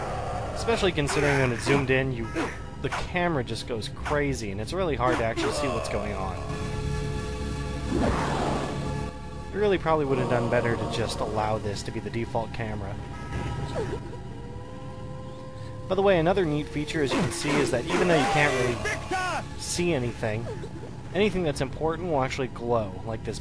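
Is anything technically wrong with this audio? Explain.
No, nothing technically wrong is audible anywhere in the clip.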